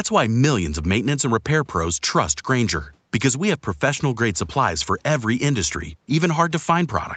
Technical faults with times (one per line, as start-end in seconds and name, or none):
none